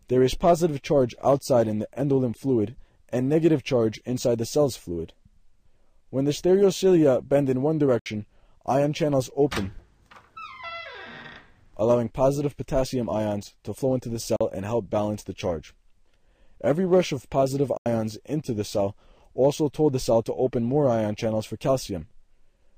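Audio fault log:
7.99–8.06 s, 14.36–14.41 s and 17.77–17.86 s, likely Bluetooth dropout: the audio cuts to silence three times, for about 64 ms, 43 ms and 85 ms, the last gap being the longest. Each hole fits a few lost wireless packets: data missed its delivery deadline, was discarded, and the output went silent until good data arrived. The sound then picks up further along rather than where it stopped, because playback kept moving through the gap.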